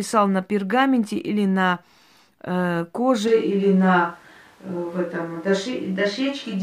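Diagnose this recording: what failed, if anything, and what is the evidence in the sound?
What failed looks like a switch to a distant microphone, at the capture end before any processing. At 3.28 s the speech turns roomy and hollow all at once and stays that way to the end, with thinner low end. The level barely moves, and a noise floor sits roughly 35 dB under the speech. The abrupt change is most likely the close mic dropping out and the recording falling back to a farther pickup, which hears more of the room.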